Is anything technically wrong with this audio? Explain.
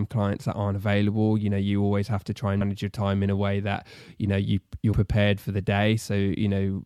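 Yes. There is damaged data in a compressed stream at 2.60 s, after "always have to try" and before "your time in a", and again at 4.93 s, after "you know you you're" and before "for the". Corrupted bytes in the encoded stream leave the decoder unable to read those frames, so it loses sync and hunts for the next valid frame header. Each break lasts only about a hundredth of a second and is heard as a short chirp or blip cutting into the speech.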